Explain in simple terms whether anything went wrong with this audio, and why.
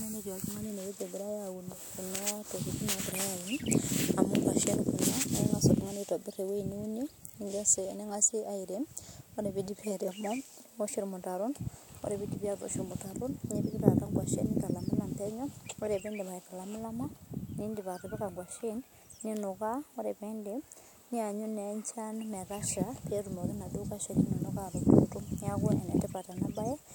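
Three sharp clicks interrupt the speech, at 6.72, 13.80 and 26.38 seconds. Each is likely caused by dropped samples. A tiny sliver of audio, well under a millisecond, goes missing. The sound then jumps abruptly, which you hear as a click.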